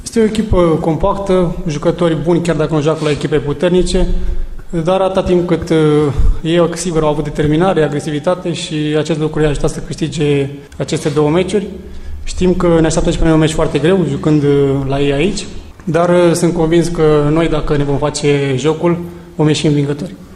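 No technical faults can be heard anywhere in the audio, and the signal holds steady throughout without any disruption to its level, timing or continuity.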